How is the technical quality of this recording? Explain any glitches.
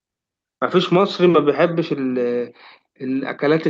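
Nothing glitchy turns up in this speech recording, just the expected character of a call codec with the top end rolled off around 8 kHz.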